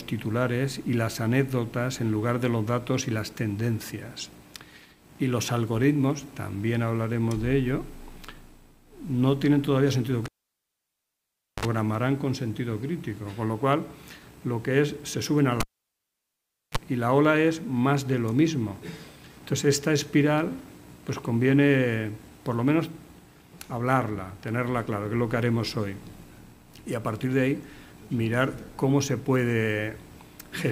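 A live cable is pulled and plugged in twice, at 10.26 to 11.65 s and again at 15.60 to 16.78 s. Each time, the broken connection drops the signal with a pop, leaving near silence for about 1.35 s and then 1.12 s. As the plug goes back in, only the tip makes contact at first, so a brief 50 Hz mains buzz of 53 ms, then 33 ms, comes through before a second pop brings the sound back.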